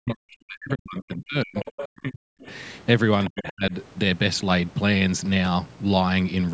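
From the start to 2.49 s the speech sinks and breaks up in speech suppressed in double talk, with the voice pulled down by roughly 40 dB at its deepest across about two seconds of that stretch. The likely cause is an echo canceller that could not tell the near talker from loudspeaker echo while both sides spoke, so it attenuated everything. On a waveform the envelope collapses into thin, ragged fragments. A spectrogram shows the harmonics fading to near-blank patches.

Inside that stretch, from 1.56 to 1.85 s, the other side's voice leaks through at roughly 10 dB below the speech. It likely comes from loudspeaker playback the canceller failed to remove. It sounds like a second voice underneath. A shorter scrap follows at 2.42 to 2.46 s, roughly 30 dB down, heard as a brief faint blip. On a spectrogram these show as weaker harmonic stacks that do not line up with the main voice's pitch contour.

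From 3.28 to 3.72 s there is another episode of speech suppressed in double talk, again dropping by up to roughly 40 dB over about 0.4 s. The voice briefly ducks and gaps. The waveform shows a notch-like dip in amplitude, and the spectrogram shows a short, nearly empty vertical band. Through all of this the call's microphone processing leaves nothing above 8 kHz, which is expected.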